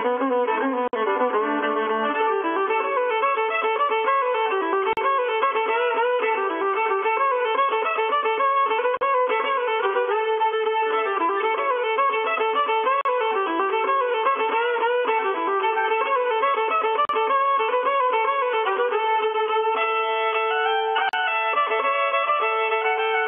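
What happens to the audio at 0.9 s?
At 0.88 s the sound drops out into a gap at a join of encoded pieces. The silence runs to 0.93 s, about 54 ms. The audio was encoded in separate pieces and joined without trimming. The encoder's start-up delay and last-frame padding both stayed in. The edges are smeared by the codec. Then the sound resumes where it stopped. The same join gap recurs every 4.0 s.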